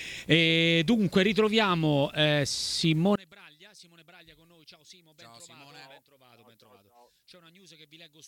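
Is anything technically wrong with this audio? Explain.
Yes. Two faults are present.

A video or display buzz runs through the whole clip. A screen or video cable is coupling its field-rate energy into the audio path, so a 60 Hz buzz sits under the sound with a layer of harsh hash above it, roughly 30 dB below the programme. It is steady and does not track the content, which is what points to interference rather than anything in the recording itself.

From 3.16 s to the end, the level drops by about 28 dB and the sound turns faint, with the centred, common material largely gone. This is likely one channel inverted. If one side of the stereo pair has reversed polarity, the parts both channels share cancel when they are summed to mono, leaving only the faint difference between them.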